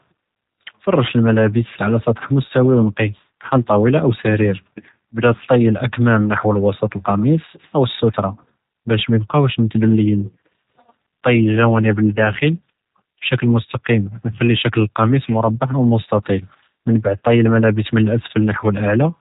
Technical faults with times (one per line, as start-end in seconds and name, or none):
0.00-19.21 G.729 codec